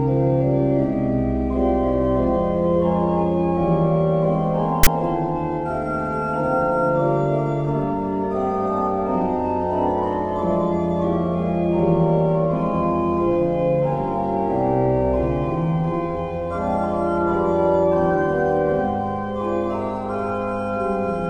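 File tags played as audio at 4.83 to 4.87 s: a text tag block is read as samples, giving a brief, loud, hard-edged rasp offset to one side.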